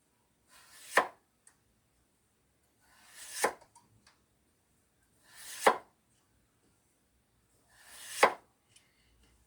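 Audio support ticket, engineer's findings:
Frames out of order at 3.65–3.67 s: two adjacent 10 ms blocks decoded in swapped order, giving a brief garbled flutter; no time lost.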